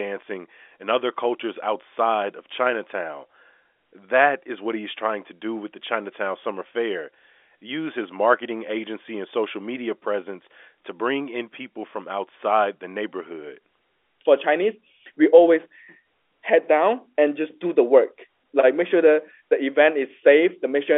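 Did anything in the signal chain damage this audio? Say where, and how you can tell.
No, nothing in the chain has harmed this one; the speech just has the narrow 300 Hz to 3.5 kHz band you'd expect from ordinary G.711 telephone coding, which is simply how a phone line sounds.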